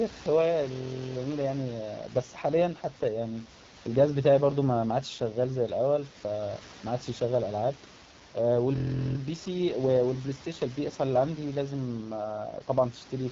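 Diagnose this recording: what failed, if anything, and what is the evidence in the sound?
The speech sounds rough and raspy from start to finish, with a gritty edge and a hissy, synthetic top end. Nothing is present above about 7.3 kHz, and the room noise sits about 18 dB below the speech. The fault is at the codec stage: AMR wideband (HD Voice) coding at one of its lowest rates, which fits the 8.85 kbit/s mode. At that rate the pulse-driven vocal tract model is too coarse to reproduce the voice cleanly, and the band above 6.4 kHz is filled with shaped noise.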